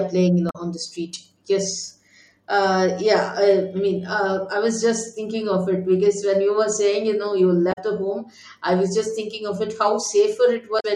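Damaged data in a compressed stream breaks into this speech recording three times, at 0.47–0.56 s, 7.69–7.78 s and 10.77–10.85 s, each a burst of about 90 ms. Corrupted bytes make the decoder misread frames and lose sync, producing a brief chirp, squawk, click or short hole until it locks onto the next valid frame header.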